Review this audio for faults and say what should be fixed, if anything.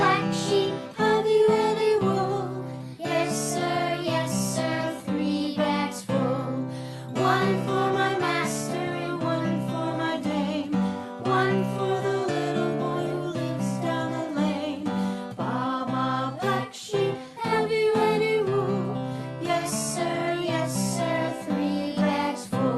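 Nothing here needs fixing; the audio has come through a call path whose top end tops out around 12 kHz, which fits Opus at a healthy bitrate, and that's simply how that route sounds.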